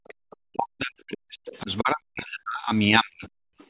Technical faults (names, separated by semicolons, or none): background gated by the echo canceller; other side's voice leaking through; speech suppressed in double talk